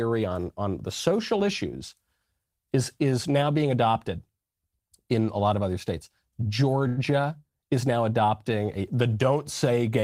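At 6.87 s a packet arrived late and the jitter buffer ran dry, causing a short stall from a late packet: the receiver held the last sound for about 97 ms, until 6.99 s, then resumed with nothing lost, leaving a briefly stretched syllable with a slight buzz or dip.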